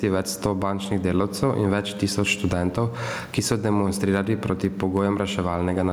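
Gain pumping throughout: the background swells in pauses and ducks by around 15 dB under loud syllables, likely from excessive input gain driving a fast limiter.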